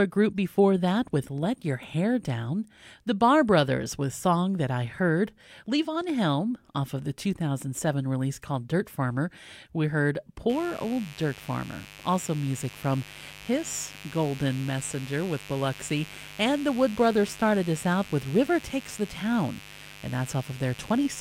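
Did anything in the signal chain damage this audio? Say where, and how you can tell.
Yes. From 10.49 s to the end, right after "we heard", a steady, raspy buzz sits roughly 20 dB under the speech. This mains buzz enters in the analogue wiring: switching spikes at twice the 50 Hz mains rate spray harmonics up into the kilohertz range.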